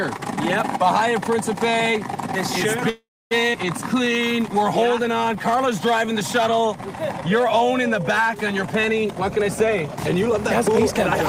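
A call audio freeze at 2.89 to 3.33 s holds the sound for about 0.42 s, a fading fill ending in 260 ms of silence, likely from delayed packets emptying the jitter buffer. A skip ahead at 3.53 to 3.56 s drops about a fifth of a second, joining both sides of the jump almost directly. A jitter buffer slow-down from 3.94 to 6.69 s repeats pitch periods, running at 93% speed and adding 206 ms, so sounds are drawn out at unchanged pitch. A jitter buffer speed-up from 9.05 to 10.75 s trims short pitch periods, running at 109% speed and removing roughly 0.15 s, so the audio sounds hurried.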